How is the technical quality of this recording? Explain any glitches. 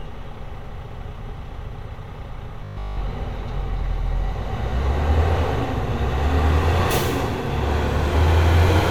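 One glitch stands out. From 2.65 to 3.03 s there is robotic sound from repeated short buffers. A fixed 50 Hz buzz runs through the whole stretch, rigid and metallic. The likely cause is audio arriving too late, so a segment of about 20 ms was replayed over and over while new material was skipped.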